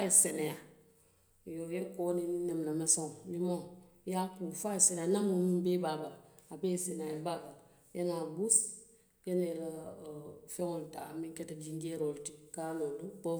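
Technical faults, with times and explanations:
Nothing stood out as a technical problem on listening to this speech recording.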